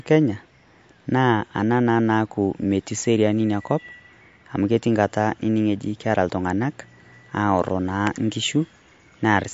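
Speech with MP3 compression damage throughout: nothing above 7.6 kHz and watery, swirling sibilants, not a plain low-pass, pointing to a likely low bitrate near 48 kbps.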